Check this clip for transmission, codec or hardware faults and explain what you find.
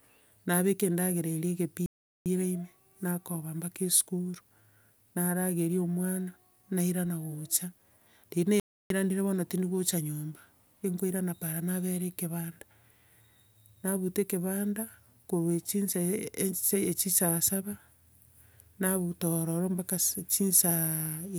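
Two playback stalls interrupt the speech. At 1.86 to 2.26 s (397 ms) and 8.60 to 8.90 s (304 ms), the audio falls silent, likely because the player ran short of data or its thread was blocked. These are full silences lasting a few tenths of a second, not brief clicks or short dropouts.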